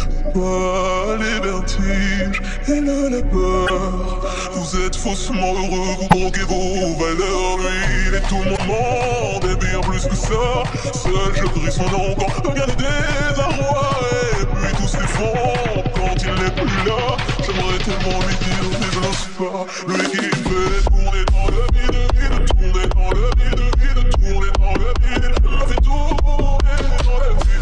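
Three short bursts of damaged data in a compressed stream break up this audio, at 3.65 to 3.70 s, 6.08 to 6.13 s and 8.53 to 8.59 s, each lasting under 60 ms. At those points the stored bitstream was corrupted, so the decoder misread the affected frames, lost frame sync and had to hunt for the next valid header. The result is a brief chirp or blip.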